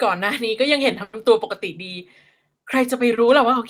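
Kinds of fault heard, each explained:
Call audio freeze: the speech stops moving forward from about 1.03 to 1.15 s while the last sound is carried on as a fading buzz, likely from packets held up in transit. Nothing is lost, and the rest arrives about 100 ms late. On a spectrogram, the harmonics smear into flat horizontal bands, and the waveform shows a repeating, decaying pattern.
Short stall from a late packet: at about 3.15 to 3.19 s, one packet arrives after it was due, so the last sound is stretched by roughly 20 ms before the speech picks up where it left off. It is heard as a brief held tone with a slight dip. On a spectrogram this is a short horizontal smear, and the waveform shows a few repeated cycles.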